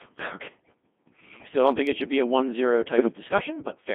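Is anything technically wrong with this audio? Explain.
Yes. There are two faults.

Throughout, the speech has passed through the Codec 2 vocoder at 2.4 kbit/s, confined to roughly 150 Hz to 3.5 kHz. The decoder does not reproduce the original waveform. It rebuilds the voice from sine waves driven by transmitted pitch, voicing, energy and spectral envelope parameters. The damage here is heavy: the voice sounds robotic and buzzy.

From 2.98 to 3.08 s, bit errors on digital voice radio corrupt the stream. Around one bit in twenty is flipped, and the 100 ms disturbance fits a single damaged frame. At this low rate each bit controls a parameter of the whole frame, so corrupted bits produce wrong pitch, level and voicing values. The result is a brief warbling bleep, a sudden jump in pitch and tone colour, before normal decoding resumes.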